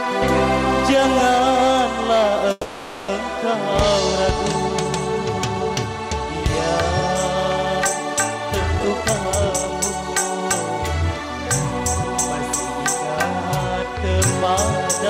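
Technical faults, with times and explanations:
2.51 to 3.09 s, call audio freeze: the sound stalls into a fading buzz for about 570 ms, likely late packets draining the jitter buffer, then resumes with nothing lost.
8.72 to 9.72 s, jitter buffer speed-up: playback runs at about 142% with pitch unchanged, trimming roughly 0.4 s of built-up delay through repeated tiny pitch-period cuts, so it sounds rushed.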